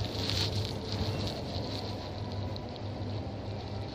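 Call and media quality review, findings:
Word clock ticks: brief clicks, roughly every 0.7 s, 0.72–3.82 s. Receiver on an unlocked clock, off by around 40 ppm, slips one sample per cycle.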